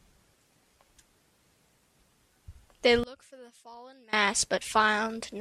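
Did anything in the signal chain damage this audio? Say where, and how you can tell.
Yes. From 3.04 s to 4.13 s the speech suddenly collapses to a faint trace, about 26 dB quieter, then returns at full strength. What remains sounds as if the centre of the image has been scooped out. The cause is likely one channel inverted, with one leg of the stereo pair reversed in polarity somewhere in the analogue wiring. When the two channels are summed to mono, the identical centred speech cancels and only their small differences survive.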